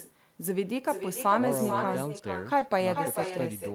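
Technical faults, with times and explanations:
Throughout, echo with no canceller: every stretch of speech is followed, a little under half a second later, by a fainter copy about 7 dB below the original, and thinner. The far end is playing the call through a loudspeaker, its microphone is picking that playback up, and nothing on that side subtracts it before sending it back. So the talker's own voice returns after the full network round trip as a trailing shadow.
2.59 to 2.63 s, short concealed packet loss: a 20 ms piece of the stream did not arrive at the decoder in time, and the receiver covered the hole with 20 ms of synthesized audio. It extended the preceding sound, repeating its pitch where the signal was voiced or using shaped noise where it was not, and then crossfaded back into the real signal. The result is a brief smear or wobble in the speech, and any short consonant in that spot may be lost.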